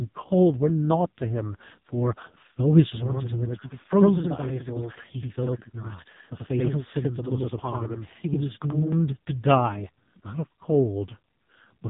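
A speech clip carried through the AMR narrowband mobile codec for its whole length. Nothing above 3.8 kHz survives, so the sound is thin and boxy. Coding damage is heavy. The voice sounds buzzy and synthetic, which points to a very low AMR-NB bitrate, near 5 kbps. From 2.92 s to 8.92 s there is a channel delay, heard as doubling. One channel runs about 85 ms behind the other, which fits a 4096-sample buffer. Summed to mono, the late copy sounds like a slap echo at equal level.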